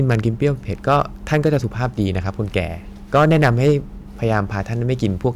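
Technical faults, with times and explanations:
0.10–0.47 s, 0.88–1.85 s, 3.15–3.71 s, 4.31–4.39 s and 5.05 s: hard clipping. The speech peaks exceed what the signal path can carry, by about 1 dB up to about 9 dB, so they are sliced off flat. Those squared tops add harmonics high up the spectrum, heard as crackle on the brief overloads and a harsh fuzz through the 3.15 s stretch. The waveform shows flat-topped peaks, and a spectrogram shows broadband vertical smears reaching the top of the spectrum.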